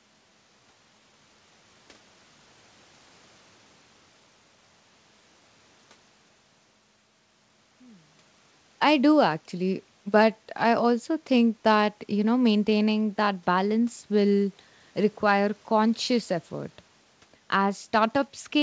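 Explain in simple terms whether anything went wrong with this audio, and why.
Nothing went wrong here; it sounds like an ordinary call.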